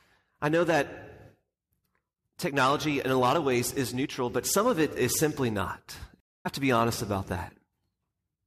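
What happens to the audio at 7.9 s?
Nothing goes wrong at 7.9 s; the speech runs on intact through that moment with no audible fault.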